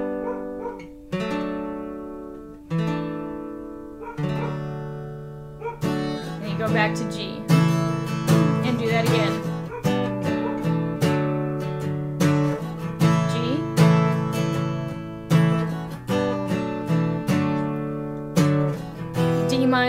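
No technical faults can be heard in this audio.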